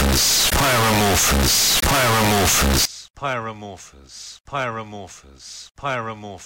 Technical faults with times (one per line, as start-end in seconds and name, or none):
0.00-2.85 float read as integer